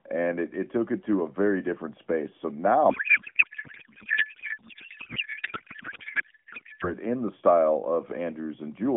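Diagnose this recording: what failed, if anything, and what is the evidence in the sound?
The failure is at the codec stage: a codec payload misread from 2.90 s to 6.93 s, starting just before "in the style". The speech gives way to garbled noise and warble that barely follows it. That fits octet-aligned AMR frames being unpacked as bandwidth-efficient, so each parameter is read from the wrong bit positions. On a spectrogram, harmonic and formant structure dissolves into smeared, patternless energy, still held inside the narrowband AMR-NB range.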